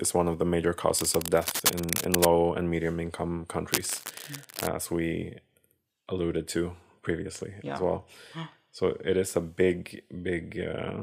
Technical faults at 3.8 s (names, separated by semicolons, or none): cable scratch noise